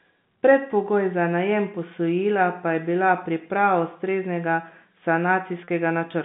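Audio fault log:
5.64–5.68 s, packet loss with pitch repetition: 40 ms of speech went missing, which fits two lost 20 ms packets. The receiver bridged the gap by repeating the last pitch period, so the sound briefly holds with a slightly buzzy, frozen quality.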